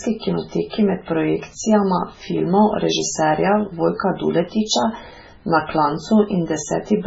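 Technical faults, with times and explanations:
Throughout, MP3 compression: the speech has no content above about 7.6 kHz and carries a heavy watery, swirling texture, with metallic chirps on s sounds and smeared consonant onsets, which fits a bitrate near 16 kbps. This is likely caused by an MP3 encoder starved of bits. It cuts the treble at a fixed frequency and zeroes weak frequency lines that then flicker on and off from frame to frame.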